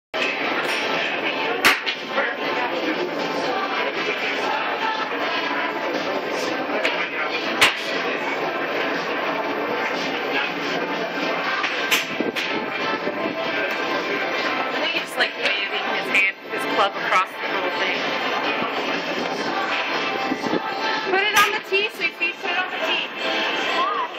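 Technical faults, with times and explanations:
21.2 to 24.2 s, switching supply whistle: a switching power supply in the chain drops into an audible burst mode, or beats against a second supply, so its switching activity lands inside the hearing range and leaks into the audio. It comes through as a thin, high whistle around 5 kHz, moving between about 5.28 and 5.58 kHz as the load shifts, sitting about 45 dB below the signal, and it lasts to the end of the clip.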